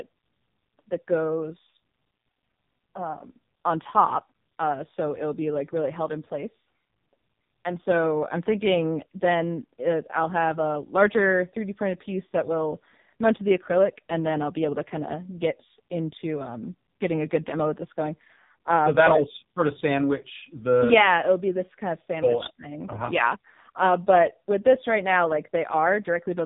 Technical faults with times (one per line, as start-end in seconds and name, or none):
0.00-26.45 AMR narrowband mobile codec